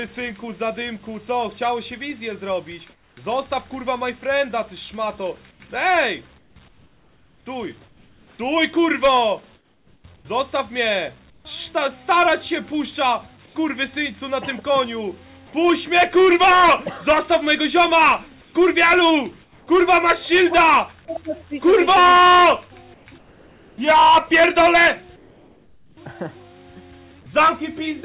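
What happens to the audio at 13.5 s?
Comfort noise in place of the background, from 13.46 to 13.55 s: for about 90 ms the real background, about 34 dB below the loud passages, gives way to a smoother synthetic noise about 3 dB quieter, likely filled in by the receiver during a discontinuous-transmission pause, with everything still capped at 4 kHz by the call codec.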